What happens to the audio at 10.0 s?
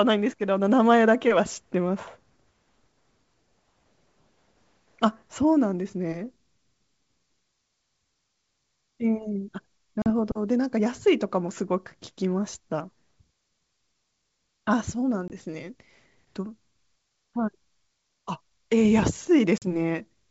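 From 10.02 to 10.07 s, packet loss on an ADPCM call leaves a hard silent hole. Unlike a clean dropout, speech returns slightly distorted as the decoder's predictor resyncs.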